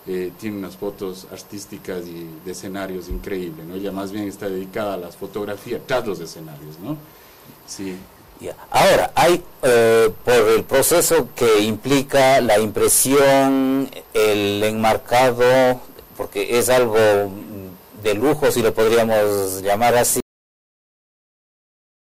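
At 20.20 s the sound stops dead in the middle of itself, a cut-off end: the final stretch of audio was never written out or played, so the signal drops straight to digital silence for the remaining 1.9 s or so. What separates this from a natural ending or a fade-out is the complete absence of decay. There is no tail, no ring-out and no gradual drop in level, just sound and then nothing.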